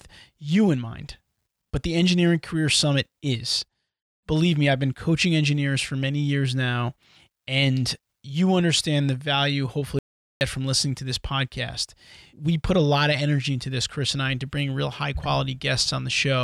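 Speech recording with one audio dropout to silence. At 9.99 s the sound cuts off abruptly. It stays gone until 10.41 s, a gap of about 0.42 s. The gap is silent, with no room tone or hiss underneath. The speech then resumes mid-flow. Whatever was said in that stretch is lost. The likely cause is a brief loss of the input signal, with the recorder writing silence until it returned.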